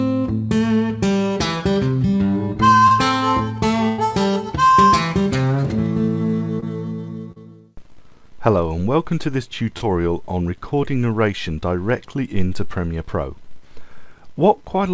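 At 2.88–2.92 s, 6.60–6.64 s, 7.32–7.38 s and 9.78–9.83 s, short concealed packet loss fills gaps of 20 to 40 ms with continued sound. Each gap is heard as a brief smear or wobble, not a dropout. At 3.88–4.00 s, a burst of packet loss removes about 100 ms. The stretched sound fades into a held buzz or hiss before the audio resumes further on. Nothing is heard above 8 kHz, as expected from the G.722 call codec.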